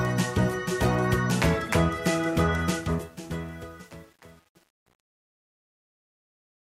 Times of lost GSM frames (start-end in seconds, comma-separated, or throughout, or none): none